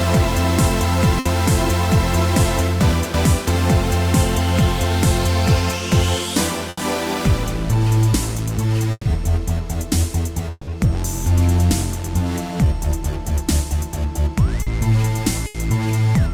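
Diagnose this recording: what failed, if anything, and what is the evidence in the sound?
Network stage, burst of packet loss: runs of packets never arrived at 1.19, 6.69, 8.91 and 15.47 s. The receiver stretched and faded the last sound, skipping 60 to 140 ms.

Network stage, a long network dropout is the likely cause: at 10.51 to 10.71 s the last sound is held and fades, goes briefly silent, then resumes with 160 ms gone.

Network stage, short concealed packet loss: at 14.63 to 14.69 s the decoder filled a 40 ms hole by continuing the last sound, heard as a brief smear.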